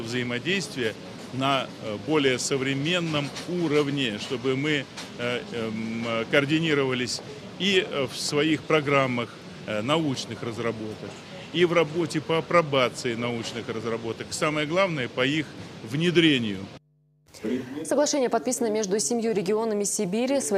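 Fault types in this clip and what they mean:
No technical faults are audible anywhere in the clip.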